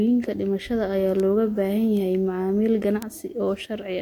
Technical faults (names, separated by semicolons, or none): bit error spike